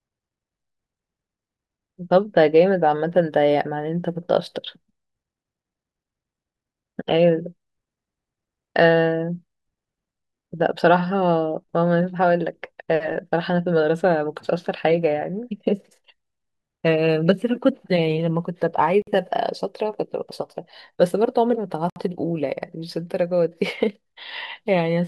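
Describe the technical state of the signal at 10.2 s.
At 10.2 s the signal is intact, with no fault audible at that moment.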